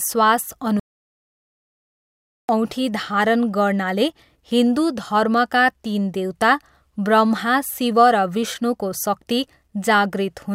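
A playback stall cuts the speech from 0.80 s to 2.49 s, silencing the output for about 1.69 s in mid-flow before the talker resumes with "औँठी धारण गर्नाले हिन्दु". The sound simply drops away rather than fading, then picks up again. The likely cause is the player running short of buffered data, or its audio thread being blocked, so nothing reached the output until it recovered and carried on.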